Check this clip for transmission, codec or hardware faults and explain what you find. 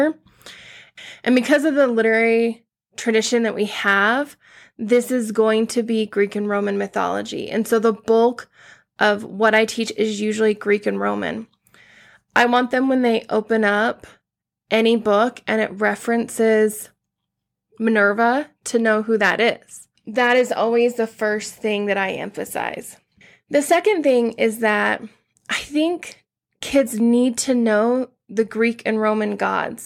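No transmission, codec or hardware fault can be heard anywhere in this speech recording, so the signal is technically sound.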